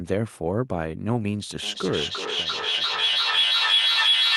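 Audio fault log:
1.63 s to 4.37 s, feedback howl. A microphone-to-loudspeaker loop gains level on each pass, so repeats grow instead of dying away. The tone narrows to around 3 kHz, with the loop repeating roughly every 0.3 s. It peaks about 6 dB above the speech.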